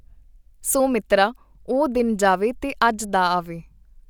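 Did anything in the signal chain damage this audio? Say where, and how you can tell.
No, nothing in this signal chain damaged the audio.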